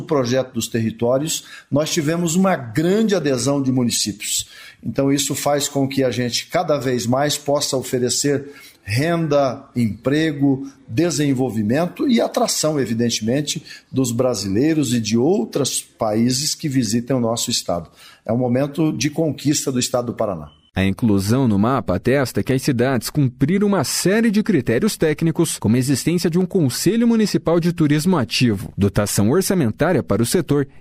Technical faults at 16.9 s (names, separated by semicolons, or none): dropped samples